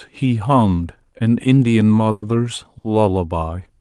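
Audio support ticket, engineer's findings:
Call audio freeze, 2.11–2.24 s: 110 ms of decaying buzz/hiss continuing the preceding sound, then speech resumes where it left off with nothing lost, playback now about 110 ms later. Likely a jitter buffer underrun from delayed packets. Spectrogram: smeared, fading copy of prior spectrum; waveform: tapering envelope, no hard dropout.

Short stall from a late packet, 2.78–2.86 s: one sound held 60 ms too long, with a slight buzz or dip. Jitter buffer ran dry and the receiver stretched the last frame until the packet landed, adding 60 ms delay. Spectrogram: brief horizontal smear; waveform: repeated periods.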